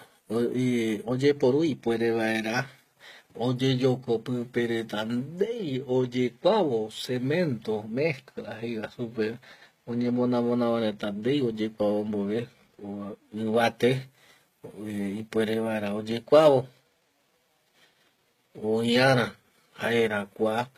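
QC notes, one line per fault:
Throughout: HE-AAC compression, likely from a low-bitrate encode, with the treble of the speech sounding plainly gritty, metallic and lispy on s sounds. The upper band is not the original but lower bands copied upward and shaped by a coarse envelope, so harmonics fail to line up across the crossover. The damage points to a rate near 20 kbps. A spectrogram shows blocky, repeated patches in the treble and nothing at all above 14.9 kHz.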